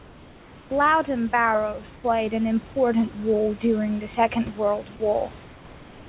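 Throughout the speech the level breathes by about 5 dB. Loud and soft passages sit closer together than they should. This is gain pumping, likely from input gain set too high with a fast limiter or compressor clamping down on every peak and releasing in the pauses, which leaves the delivery squashed.

From 0.0 to 0.7 s the background is replaced by comfort noise: a smooth, featureless hiss about 3 dB quieter than the real room sound. The same swap occurs for about 80 ms at 1.96 to 2.04 s, just before "an important role during", and again from 5.44 s to the end, there about 2 dB down. The sender's voice detector likely judged these stretches silent and stopped transmitting, so the receiver filled them with synthetic noise. All of this sits within a path already band-limited to 4 kHz.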